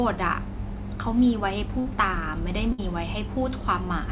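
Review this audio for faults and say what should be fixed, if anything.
A held, fading smear and then a skip at 1.80–1.87 s and 2.72–2.80 s is a burst of packet loss: the receiver stretched the last sound over each gap, and about 60 ms is missing each time. A deeper jitter buffer, forward error correction or redundant packets, and a more stable network connection would prevent these dropouts.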